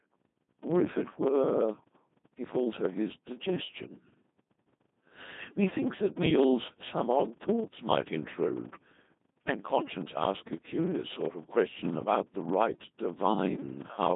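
From start to finish the speech carries a block size mismatch (padded). Each block is written slightly short of the 1024-sample read that follows, which fits the gaps heard, and the shortfall is zero-filled. The result is a steady 23.4 Hz buzz and delivery slowed to 0.938 times normal speed at roughly unchanged pitch. A waveform shows regularly spaced flat dropouts, and a spectrogram shows thin vertical gaps repeating at that rate.

Over the same span the Codec 2 vocoder leaves the speech robotic and buzzy, with heavy damage. Only pitch, voicing, energy and envelope survive, so the sound is rebuilt from sine waves. Its coarseness points to a rate around 2.4 kbit/s. A spectrogram shows smeared, overly regular harmonics confined to 150 Hz to 3.7 kHz.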